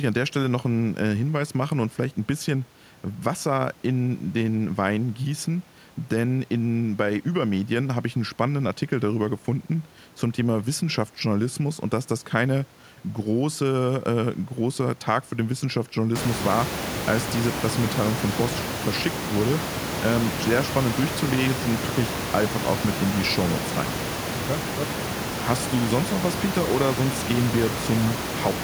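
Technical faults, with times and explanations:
No technical faults; the room's background noise climbs by about 24 dB from around 16 s to sit about 7 dB below the speech, which is part of the recording itself.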